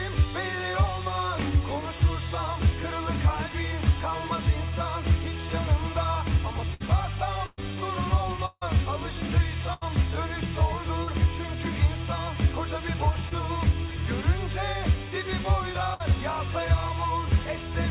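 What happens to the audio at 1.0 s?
Nothing goes wrong at 1.0 s: the audio is intact there, with the narrow band of a G.711 A-law call path that leaves nothing above 4 kHz.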